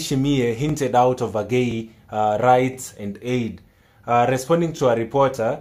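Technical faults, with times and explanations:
0.69–0.71 s, 1.71–1.73 s, 2.73–2.75 s and 4.77–4.79 s: overlapping chunks. The audio arrives in 1.0 s blocks, and each new block starts 20 ms before the previous one finished, so that sliver plays twice and the sound briefly stutters or clicks at each join. On a waveform, each join shows a short repeated segment with a discontinuity at its edge. On a spectrogram, each appears as a thin vertical broadband line.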